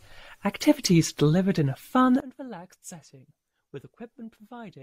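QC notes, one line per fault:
2.20 s to end, sudden gain jump: gain likely stepped down with no ramp after "delivered in a fun", dropping speech and background noise together by about 19 dB.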